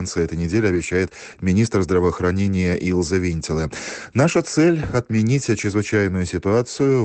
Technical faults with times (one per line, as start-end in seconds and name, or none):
0.75-0.81 lost packet rebuilt from error correction
5.11-5.17 lost packet rebuilt from error correction